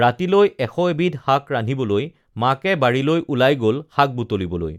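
Speech recording with no technical fault to point to. Nothing in it calls for a time or a cause.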